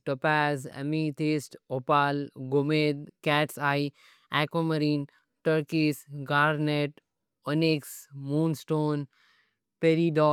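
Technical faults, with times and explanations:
No audible technical faults.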